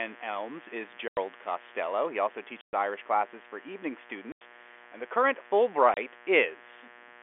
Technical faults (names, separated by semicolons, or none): mains buzz; packet loss filled with silence